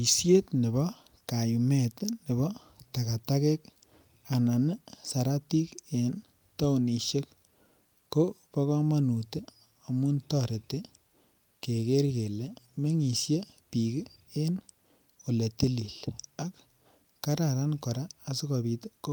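At 11.07 s there is a short stall from a late packet, lasting to about 11.12 s. A packet missed its playout time, the jitter buffer ran dry, and the receiver held the last sound for about 30 ms before resuming exactly where it left off. Nothing is lost, so unlike a dropout or concealed packet loss there is no gap or skipped sound. There is only one syllable frozen a beat too long, with a slight buzz or dip, and playback runs about 30 ms later afterwards.

From 12.48 s to 13.11 s comes a jitter buffer slow-down. Rather than one frozen moment, the receiver rebuilt its reserve by repeating single pitch periods and slivers of pause over and over, adding about 43 ms across that stretch. The speech plays at roughly 94% speed with the pitch unchanged, so sounds feel gently drawn out, perhaps with a slight warble. It is spread across the span, not held at one point as in the stall just before.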